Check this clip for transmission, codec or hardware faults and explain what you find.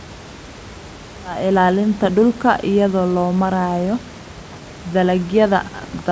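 Nothing here points to a transmission, codec or hardware problem: the speech eases in with a gentle fade that finishes around 1.6 s, the top end stops at about 8 kHz as you'd expect from a G.722 call at 64 kbps, and the room noise sits roughly 24 dB beneath the speech.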